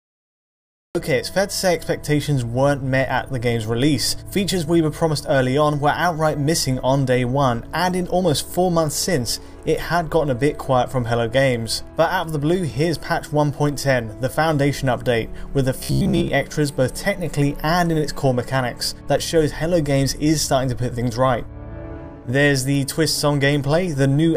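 The clip opens with digital silence. At 0.95 s the sound cuts in abruptly, already in the middle of a sound. This is a cut-off start. Capture began late, so the opening of that sound was never recorded. There is no rise and no fade-in. The level jumps from nothing to full in an instant, which is why the entry feels sudden and clipped rather than natural.

From 15.83 to 16.28 s the sound turns robotic, the result of repeated short buffers. It takes on a hard, metallic buzz pitched at about 66.7 Hz. That pitch fits a chunk of roughly 15 ms being played over and over. The likely cause is new audio arriving too slowly, so the player repeats its last buffer. Most of this stretch is repeats, and the real material underneath is skipped.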